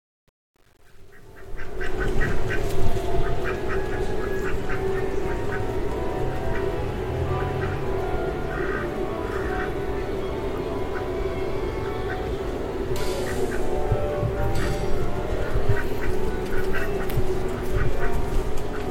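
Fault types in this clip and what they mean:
Truncation distortion on a fade: the undithered fade-in up to 2.0 s sounds gritty, worst until 1.68 s, consistent with 9-bit resolution.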